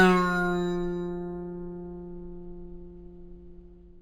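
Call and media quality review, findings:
Imaging from linear upsampling, throughout: dull top end plus faint metallic shimmer, mirror images roughly 30 dB down above 5.5 kHz, which fits a straight-line 11 kHz to 48 kHz rate conversion. Unlike aliasing, images sit above, not folded below.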